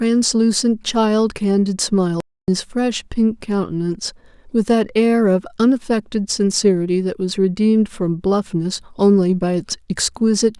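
At 2.20 s the speech cuts out abruptly and stays silent until 2.48 s, a gap of about 276 ms, then resumes. This playback stall likely came from the player running short of data or being blocked. On a waveform it shows as a flat line, and on a spectrogram as an empty vertical band with hard edges.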